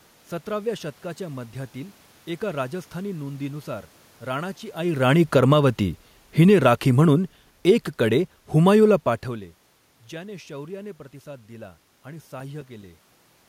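From 6.25 s to 9.37 s the automatic gain is falling. The gain control judged the input too loud, or its background noise too strong, and pulled its gain down gradually, by about 6 dB in total. The speech and the room noise beneath it sink together, which sets it apart from the talker shifting position around 4.5 s and 9.0 s. On a waveform the envelope tapers steadily across those three seconds, and on a spectrogram the whole picture dims evenly, background included.

Between 12.19 s and 13.03 s there are CD scratch ticks: five short clicks, roughly six a second, each lasting no more than a few milliseconds. A blemish on the disc destroyed more data on each revolution than error correction could rebuild, so the player interpolated or muted the damaged samples. A waveform shows brief notches or spikes at regular spacing, and a spectrogram shows thin vertical lines, repeating at each turn of the disc.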